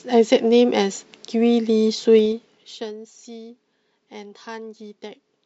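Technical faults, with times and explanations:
2.16–2.96 s, zipper noise: the speech level falls by around 20 dB in unsmoothed 2 dB steps, roughly fifteen per second, and each jump clicks, so the fade ticks. The waveform envelope shows a staircase, and the spectrogram shows faint vertical lines at each step.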